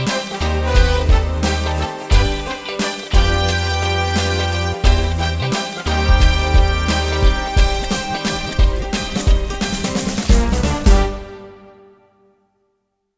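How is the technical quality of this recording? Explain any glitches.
Nothing in the recording stood out as a technical problem on listening.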